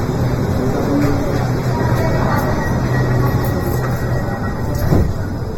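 Comb filtering from a channel delay runs the whole way through: one side lags a fraction of a millisecond, so the mono sum notches out near 3 kHz, sounding hollow.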